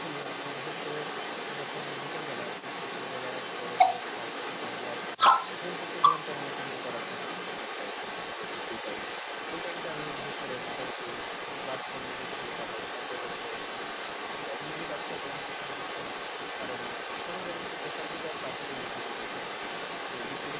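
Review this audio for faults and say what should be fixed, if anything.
The other side's voice leaks through for the whole clip, from 0.0 to 20.6 s. A second voice runs alongside the speech throughout. It sits roughly 5 dB louder than the talker. The likely cause is the talker's device playing the far end on a loudspeaker while its echo canceller fails to remove that sound from the microphone. The narrow band, with nothing above 4 kHz, fits a G.711 call path. To prevent it, use a headset or retune the echo canceller.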